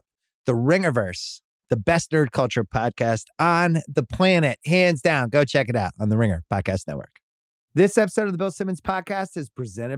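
Speech recording with no audible technical faults.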